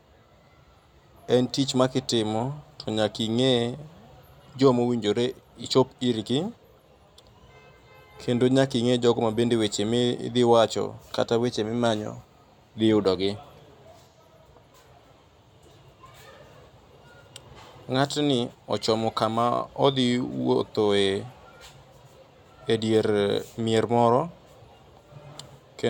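No technical faults can be heard anywhere in the recording, so there is nothing to place in time or explain.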